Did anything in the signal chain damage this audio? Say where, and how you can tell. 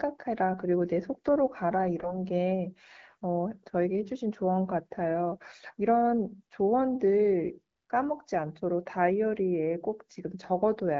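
Yes. From 1.99 to 2.15 s the audio turns briefly hoarse and gargly, scratchy rather than silent, while its pitch and loudness roughly hold. These are AMR bit errors on the network link. On a weak radio path, bits in the wideband codec's less protected fields arrived flipped, around 5 percent of them. The checksum on the critical bits still passed, so the decoder used the corrupted frames. Its excitation pulses landed in the wrong places and the fine gain, pitch and spectral values drifted. Four 20 ms frames within the span were hit.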